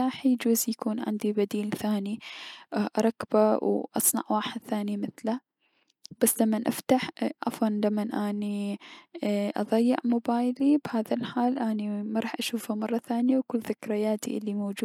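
No technical faults can be heard anywhere in the speech.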